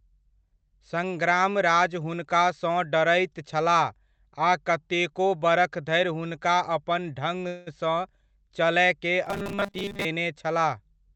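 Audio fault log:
7.47–7.69 s, call audio freeze: packets were likely held up in transit and the jitter buffer ran dry, so the receiver stretched the last sound into a fading buzz or hiss for about 0.19 s. Nothing is lost; the speech resumes where it stopped, now running later.
9.26–10.05 s, robotic sound from repeated short buffers: new audio likely arrived too seldom, and the receiver filled the gaps by looping 5 ms of the last audio, skipping most of the real speech. The loop imposes a fixed 200 Hz buzz, giving a rigid metallic sound.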